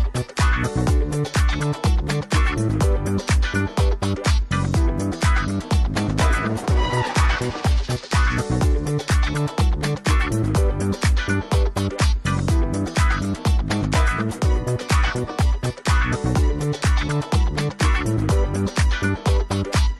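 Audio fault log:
No faults heard anywhere in this clip.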